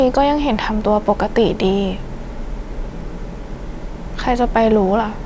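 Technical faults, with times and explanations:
Listening closely to this speech recording, nothing technical stood out at any point.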